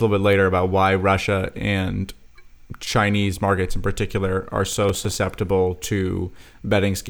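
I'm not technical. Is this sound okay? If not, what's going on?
No. From 4.73 to 5.15 s there is processor overload crackle. The computer was too busy to prepare each tiny slice of sound on time, slices of about 5 ms. Around ten slices were late, and each was replaced by a scrap of old audio. Together they make a short gritty crackle.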